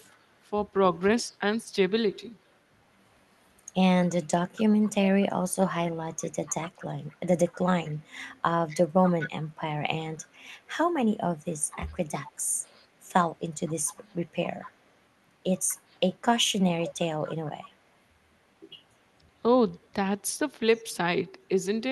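Speech clip with an echo leak: a faint copy trailing the talker by 243 ms, barely there at 0.31 to 0.4 s, a bit stronger from 1.32 to 2.56 s, then strongest at around 25 dB down from 4.05 to 17.7 s, likely a far-end loudspeaker echo the canceller didn't fully remove.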